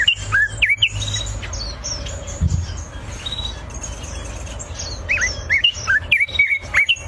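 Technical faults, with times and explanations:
No technical faults detected at any point in the clip.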